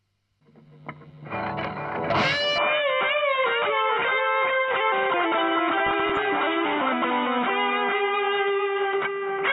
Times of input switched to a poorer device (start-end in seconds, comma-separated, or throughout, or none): 2.58-9.53